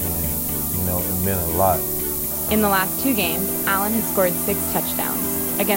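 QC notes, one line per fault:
Throughout: low bit depth with noise shaping. The audio sounds like it's been squeezed down to about 4 bits, and the rounding error from that coarse quantisation has been pushed up the spectrum instead of spread evenly. So you get a steady, thin hiss that climbs strongly toward the top of the band, and it's loud, sitting roughly 5 dB above the sound itself.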